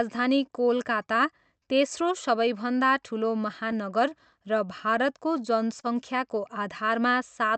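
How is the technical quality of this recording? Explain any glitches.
The speech has small timing faults from a call path whose clocks disagree. The Opus-style coding rolls the top end off around 8 kHz.

Clock drift between sender and receiver: throughout the clip, the sending clock runs about 2% slow. The receiver's jitter buffer keeps running low and has to compensate.

Repeated timing corrections: from 0.37 to 7.47 s, the receiver stretches short pieces to keep pace. Playback runs at 99% speed, adding roughly a tenth of a second, heard as a slightly dragging, uneven tempo.

Scattered short gaps: between 1.22 and 3.75 s, around five packets arrive late or go missing. Each brief hole, none longer than about 10 ms, is patched by continuing the last sound, leaving brief ticks or smears.

Short stall from a late packet: from 5.80 to 5.86 s, the buffer runs dry. The last sound is held for 32 ms until the packet arrives, producing a slight buzzy hold with nothing lost.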